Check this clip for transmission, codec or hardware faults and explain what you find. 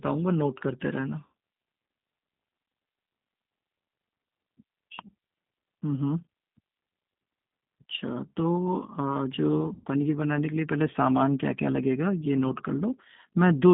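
Two faults are audible: G.729-style coding throughout the speech, and two dropouts patched over by packet loss concealment.

G.729 codec (whole clip): The speech passes through a low-rate coder that rebuilds each frame from a vocal tract filter, a pitch predictor and a few pulses, which fits an 8 kbit/s G.729A link. The line band runs from 150 Hz to 3.7 kHz, so the voice is thin and muffled, and the coding roughness and synthetic edge are plainly audible.

VoIP packet loss concealed by the speech codec (1.26 to 1.28 s, and 9.74 to 9.88 s): Audio went missing in transit, about 80 ms in the first case and 120 ms in the second. Those amounts fit four and six 20 ms packets. The decoder filled each gap by repeating its last pitch and filter settings at falling gain, so the speech smears into a buzzy tone or coloured noise that fades. Because each frame builds on the one before, the voice stays weak or distorted for a short while after the audio returns.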